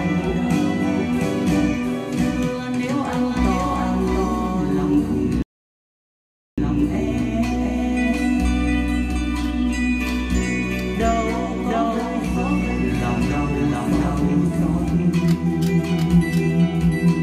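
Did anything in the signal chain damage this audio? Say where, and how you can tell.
Yes. A doubled audio track runs through the whole clip. A second, full-band copy of the sound trails the original by roughly 0.7 s. It sits at about the same level, so both layers compete equally. The trailing copy carries no decay and no room colour, which rules out a natural echo. This is a routing or edit-stage fault. The likely cause is the signal being captured twice, with one path running slower, or an edit leaving two offset copies.

There is also a rebuffering stall at the playback stage. At 5.42 s the sound drops to silence. It resumes at 6.58 s from exactly the point where it stopped. Nothing is skipped, but about 1.15 s of dead air is added. That pattern means the player ran out of downloaded audio and waited for more data before carrying on. A dropout that lost material would instead resume later in the audio.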